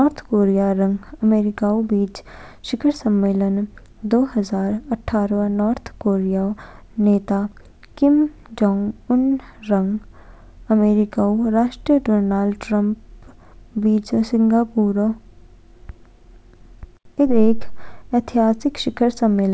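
Nothing in this speech recording stands out as a fault.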